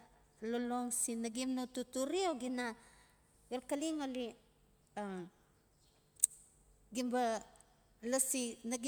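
From 2.49 to 4.58 s, speech plays 5.6% fast and 94 cents sharp. Spectrogram harmonics step upward, then drop back: likely a drift correction step.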